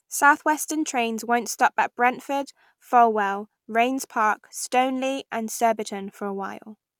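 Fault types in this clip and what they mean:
No faults are audible.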